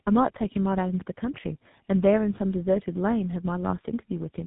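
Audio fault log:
Throughout: tandem speech coding. The call seems to have been decoded and re-encoded at network borders, which fits two low-rate speech codecs in a row with a GSM full-rate stage last. Each coder compounds the last one's damage, so the speech sounds rough, muffled and warbly, with nothing above about 3.8 kHz.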